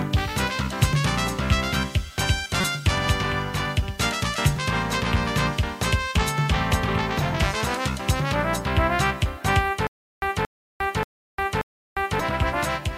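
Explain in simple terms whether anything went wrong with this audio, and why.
Damaged data in a compressed stream, at 2.61 to 2.64 s: a brief chirp or blip. Part of the compressed file was corrupted there, so the decoder misread those frames, lost its place, and skipped ahead to the next point it could recognise.

Stutter with silent gaps, from 9.87 to 12.20 s: the same 0.23 s burst of sound plays four times, each followed by about 0.35 s of dead silence, repeating every 0.58 s. The likely cause is a stalled player that replayed its last fragment at each retry, so the audio meant for that stretch is missing.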